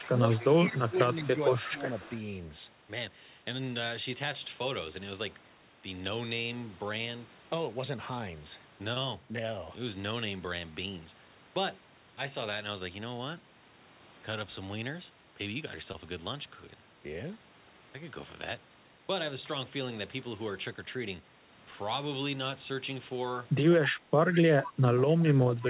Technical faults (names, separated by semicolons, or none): speech suppressed in double talk; echo leak; short concealed packet loss